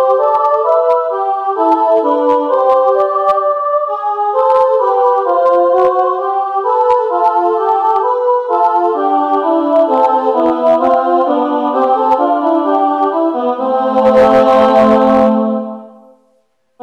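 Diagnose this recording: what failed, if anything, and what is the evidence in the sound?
Hard clipping throughout: driven about 7 dB past a fixed-range stage, roughly one percent of samples have flattened peaks, giving crackle on loud moments.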